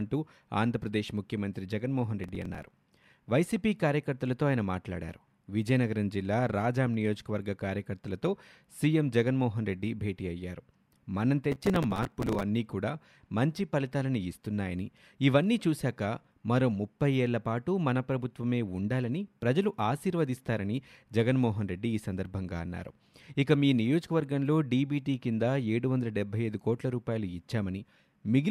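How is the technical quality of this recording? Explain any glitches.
Two bursts of processor overload crackle mar the speech, from 2.24 to 2.71 s and from 11.52 to 12.43 s. The processor repeatedly missed its deadlines for short buffers, apparently around 5 ms each. Each miss replayed stale audio with hard edges, so the speech picks up a gritty, tearing crackle, briefer in the first burst and denser and longer in the second.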